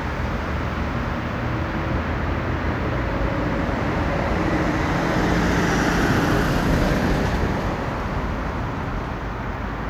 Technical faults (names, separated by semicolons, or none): loud pop